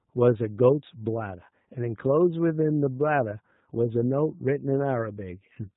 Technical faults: G.729 codec

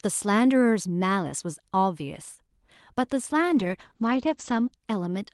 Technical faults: call bitrate drop

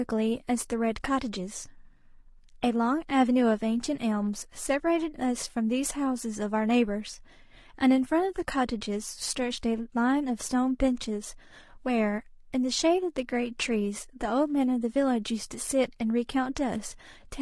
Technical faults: low-delay AAC compression

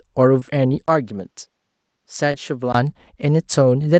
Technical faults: short concealed packet loss; input switched to a poorer device

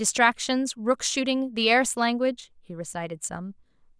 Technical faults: none

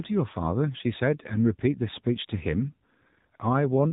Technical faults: AMR narrowband mobile codec

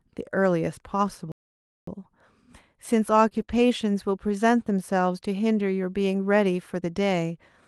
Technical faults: playback stall; short concealed packet loss; lost packet rebuilt from error correction

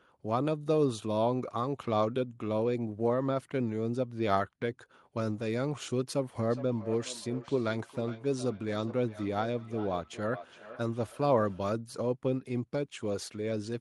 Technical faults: feedback echo between two devices

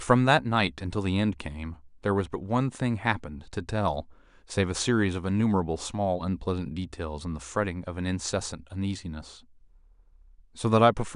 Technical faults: none

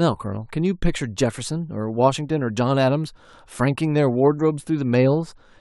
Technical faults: none

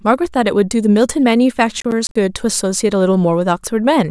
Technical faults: processor overload crackle

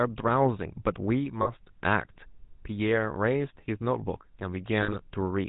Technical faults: GSM full-rate codec; lost GSM frames

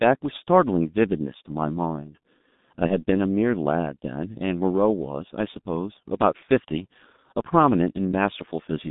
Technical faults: G.723.1 codec; VoIP packet loss concealed by the speech codec

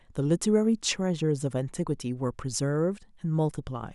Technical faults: none

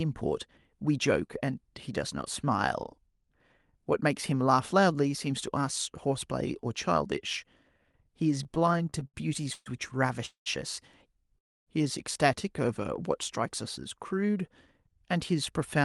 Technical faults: repeated stalls (stutter); call audio freeze; jitter buffer speed-up

